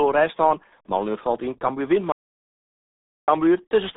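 From start to finish the speech has passed through the RealAudio 14.4 codec, an 8 kbit/s dial-up speech coder. It discards everything above about 3.8 kHz and heavily mangles what remains, so the voice comes out muffled and gargly across the whole clip. At 2.12 s the signal is replaced by an audio dropout to silence lasting about 1.16 s, until 3.28 s. The likely cause is input that was lost while recording carried on. The sound cuts off in mid-flow, and the gap is dead quiet with no room tone.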